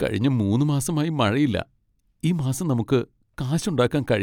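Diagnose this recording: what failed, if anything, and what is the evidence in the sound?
No fault can be heard.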